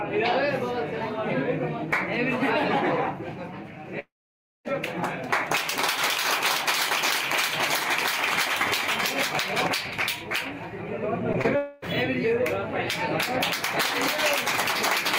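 From 3.99 to 4.67 s, a long network dropout likely cut off about 0.66 s of audio. A fading buzz gives way to near-silence, which shows as a blank gap in the spectrogram.

Short concealed packet loss follows at 11.33–11.36 s and 11.42–11.46 s. Each brief synthesized fill sounds like a smear and appears as a thin blurred vertical seam.

From 11.56 to 11.84 s, a second long network dropout, likely from lost packets, is bridged entirely by a decaying extrapolated buzz. Its smooth, featureless bands in the spectrogram stand out against the surrounding detail.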